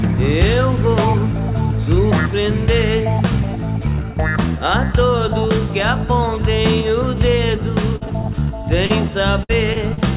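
The audio comes through a call path with nothing above 4 kHz, which fits a narrowband G.711 mu-law codec. It shows two stretches of repeated packet loss with a robotic sound. From 7.96 to 8.30 s, four gaps remove about 80 ms of signal, the longest 50 ms, and concealment fills roughly 23% of the span. From 9.43 to 9.99 s, four more gaps remove about 120 ms, the longest 58 ms, with about 21% concealed. In each stretch the receiver extends the last sound into every hole, and the next hole arrives before the signal settles, so the sound turns choppy, with pieces missing. Between these stretches, at 8.86 to 8.91 s, there is one short concealed packet loss. About 40 ms failed to arrive in time, and the decoder bridged it by carrying the preceding sound forward before blending back into the real audio. This is heard as a brief smear or wobble, and any short transient in that window can disappear.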